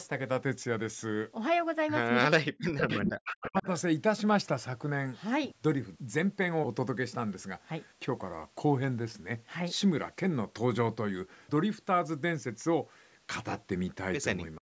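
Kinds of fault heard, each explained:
Speech suppressed in double talk: Between 2.32 and 3.67 s the speech dips and drops out in pieces, up to about 40 dB down, for roughly a second in total, and again briefly at 14.57 s. This is likely an echo canceller attenuating everything while both sides talk.
Echo leak: A delayed copy of the speech, arriving about 0.39 s late, is heard from 2.80 to 3.12 s at about 5 dB below the speech and from 3.28 to 3.80 s at about 10 dB below. Likely loudspeaker pickup that the echo canceller failed to fully remove.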